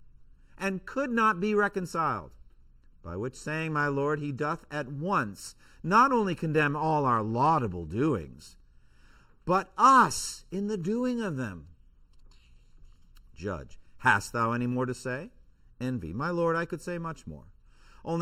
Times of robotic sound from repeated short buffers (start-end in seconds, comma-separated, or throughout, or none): none